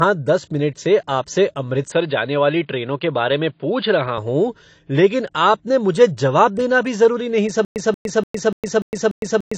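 Low-bitrate audio saved at a high bitrate affects the whole 9.6-second speech clip. Nothing sounds above 8.7 kHz, and the top end carries the smeared, swirly texture of a heavily compressed first pass. That likely comes from an earlier AAC encoding at around 32 kbit/s being re-encoded later as MP3 at roughly 210 kbit/s. The larger file cannot bring back the detail the first encoder discarded, so its cut-off and artefacts remain, with the second pass adding almost nothing.

An input switched to a poorer device runs from 1.92 s to 4.18 s, right after "दस मिनट से आपसे". The band suddenly narrows to stop at 4.8 kHz, which makes the speech dull and boxy. There is no gap at the change and no jump in loudness. A faint new noise floor appears, about 55 dB below the speech. The likely cause is the recording moving to a narrower microphone or a headset call profile, then returning to the original input.

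A stutter with silent gaps starts at 7.65 s, after "देना भी ज़रूरी नहीं", and lasts to the end. A 183 ms fragment plays, then 109 ms of dead digital silence follows. This repeats every 293 ms, six times in all. The likely cause is a stalled player or stream that replayed its last buffer on each retry and then ran empty. The speech that should have filled that stretch never arrives.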